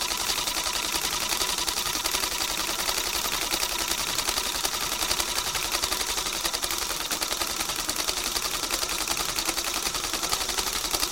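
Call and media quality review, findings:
Loud pop, 4.22–4.25 s: one sharp pulse, roughly 5 dB above the surrounding sound, which continues underneath. Likely cause: a voltage step from a connector, switch, static discharge or driver glitch, shaped by downstream circuitry into a brief thump.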